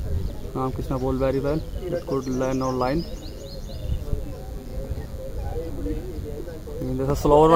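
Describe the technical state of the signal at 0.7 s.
At 0.7 s the signal carries DECT cordless phone buzz, present for the whole clip rather than as a local event. A nearby DECT handset or base transmits a radio burst every 10 ms, and the audio circuitry rectifies it, so a thin, steady buzz at 100 Hz, rich in harmonics, sits roughly 30 dB below the main sound. Mains hum is a smoother, rounder tone at 50 or 60 Hz; this buzz is raspy and thin.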